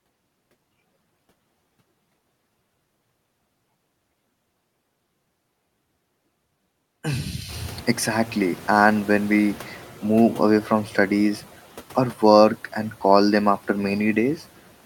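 Speech with a noise suppressor catching up from 7.48 to 9.85 s: room noise jumps about 21 dB near 7.5 s, passes through with less reduction at first, then sinks about 5 dB over 2.37 s before "move away from studies". Unlike gate pumping, it's one slow, steady fade.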